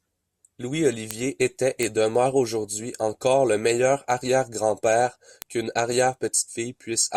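From 0.39 s to 6.86 s, word clock ticks recur about every 0.7 s, around ten in all. The receiving clock runs roughly 30 ppm off the sender's, so each slip drops or repeats a single sample, giving short, sharp clicks of uneven strength.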